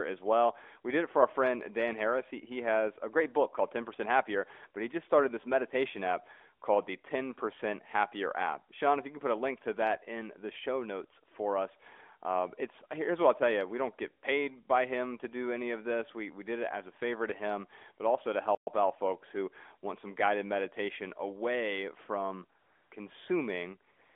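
At 18.55 s the speech cuts to silence for 120 ms and resumes at 18.67 s. This playback stall likely came from the player running short of data. From 22.60 to 22.92 s, and again from 23.92 to 24.16 s, the background becomes a smooth, steady hiss. This is AMR comfort noise: the phone sent no speech frames, so the receiver synthesised filler noise in the narrowband call's 300 Hz to 3.5 kHz band.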